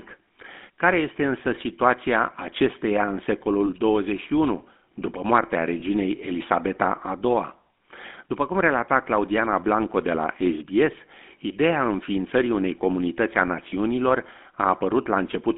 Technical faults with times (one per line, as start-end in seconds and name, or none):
0.00-15.57 GSM full-rate codec
3.66-3.69 lost GSM frames
5.80-5.83 lost GSM frames
13.70-13.73 lost GSM frames